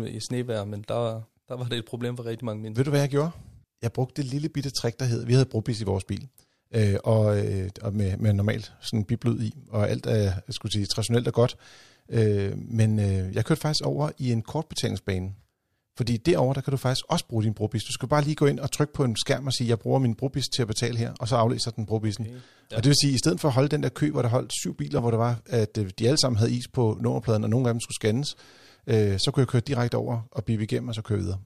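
Speech recording, no technical faults heard anywhere in the clip.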